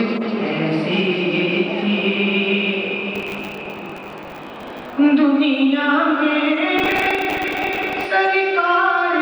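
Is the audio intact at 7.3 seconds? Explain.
No. At 7.3 s the audio is inside a burst of processor overload crackle running from 6.78 to 8.07 s. Buffers of around 10 ms repeatedly miss their deadlines, and each late slot replays stale audio with hard edges. Dozens of these in a row produce a gritty crackle over the sound.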